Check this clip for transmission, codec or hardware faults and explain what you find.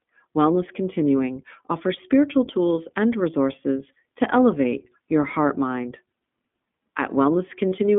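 Two faults are audible: narrowband iLBC coding across the whole clip, and a short stretch of lost iLBC frames near the end.

The iLBC codec runs throughout. The speech is confined to roughly 200 Hz to 3.5 kHz, and each frame's excitation is coded on its own, which fits the 15.2 kbps mode with 20 ms frames. The damage is plainly audible as a rough, slightly synthetic texture.

Lost iLBC frames occur from 7.69 to 7.72 s, about 40 ms of missing audio, consistent with two 20 ms frames. The decoder fills the gap by repeating the last pitch cycle with added noise, so it sounds like a brief held, buzzy vowel before normal audio resumes almost immediately.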